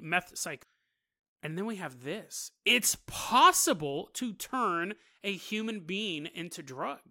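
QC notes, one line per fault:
0.63 s, compressed frames skipped: the speech jumps ahead by about half a second, as whole compressed frames were lost or rejected as damaged by the decoder.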